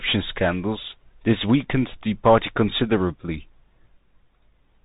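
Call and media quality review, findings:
Bluetooth CVSD headset codec, whole clip: speech band-limited at 3.8 kHz, granular hiss, scratchy sibilants from delta-step slope overload, fitting a 64 kbps CVSD link. Hiss and grit separate it from simple narrowband filtering.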